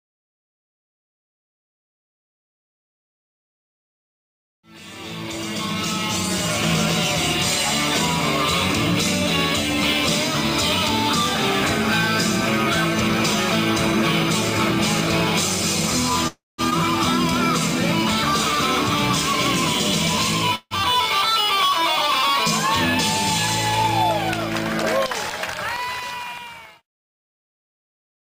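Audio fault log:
16.27–16.61 s, call audio freeze: sound stalls and is padded for about 308 ms, fading into 180 ms of silence, likely from delayed packets draining the jitter buffer, then resumes intact.
16.70–16.74 s, skip ahead: playback jumps forward with an 11 ms join, losing roughly 200 ms of audio.
20.55–20.74 s, call audio freeze: a shorter 154 ms stall, the last sound extended then 30 ms of silence, likely late packets again, with nothing lost on resuming.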